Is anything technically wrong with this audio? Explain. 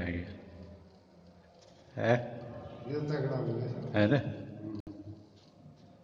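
Yes. At 4.80 to 4.88 s the sound drops out for about 66 ms, then resumes. This is most likely a Bluetooth stall. Radio interference delays packets, the receiving buffer empties, and playback halts until the resent data arrives. It is heard as a brief hard gap.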